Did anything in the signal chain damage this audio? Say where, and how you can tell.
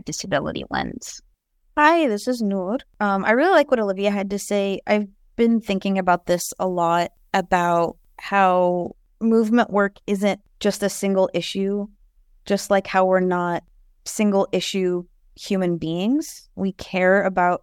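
Yes: pre-emphasis left on in the analogue stage. From 6.15 to 8.28 s, after "say I've been thinking", the speech turns thin and sibilant. A 50 µs FM treble boost, about 10 dB at 10 kHz, was never de-emphasised.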